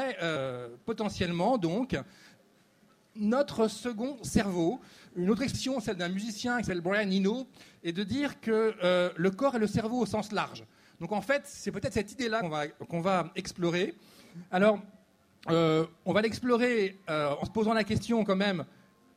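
Short skips at 5.53, 10.54, 12.40 and 17.42 s jump the audio ahead by about 150, 50, 70 and 50 ms: compressed frames skipped, consistent with roughly 23 ms codec frames.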